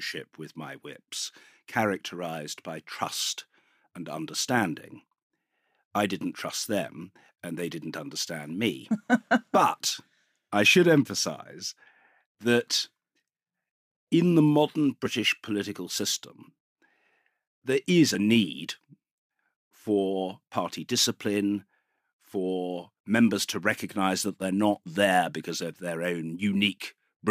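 Speech with compressed frames skipped at 15.05 s, between "in the modern" and "political system", and at 18.14 s after "there is". Each is a jump ahead where about one 23.2 ms frame is lost.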